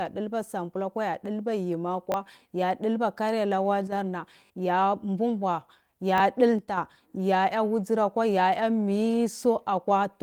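Speech with three short stutters: at 2.12 s and 6.18 s a tiny fragment plays twice with a hard seam, heard as a quick tick-like catch, and at 4.46 to 4.5 s the same fragment plays three times, giving a slightly longer buzzy hiccup. This is a repeated buffer fault. Fresh audio arrived late, so the player reissued the previous block, which fits a 20 ms buffer, and a brief slice of the real sound is skipped each time. The speech also twice sinks abruptly in loudness, by about 6 dB, and then recovers. The first dip is very brief, from 3.87 to 3.92 s. The second runs from 6.59 to 6.77 s, ending just before "ya ya wudzurakwa ya". The likely cause is one channel dropping out of a stereo feed, so that after mixing to mono only half of the shared signal remains while it is missing.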